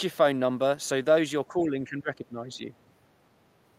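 A speech recording whose level sinks from about 1.48 s to 2.61 s, dropping by roughly 10 dB at its deepest point, with the affected stretch totalling around a second. This is speech suppressed in double talk, most likely an echo canceller that heard both ends talking at once and turned down the near talker along with the echo. Unlike packet-loss dropouts, the dip follows the overlap in talk rather than random lost packets.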